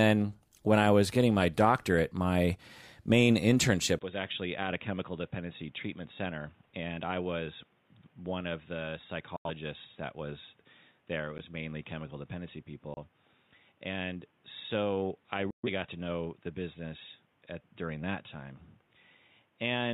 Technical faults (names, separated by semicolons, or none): input switched to a poorer device; digital broadcast dropout; block of digital silence